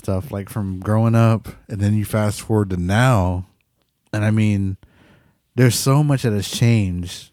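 Just after "like from growing", from 1.36 to 3.25 s, the speech slows by 5.7% and drops about a semitone (−102 cents), then snaps back: a drift correction step, likely from clock-matching software resampling. On a spectrogram, the harmonic stack steps down, then jumps back.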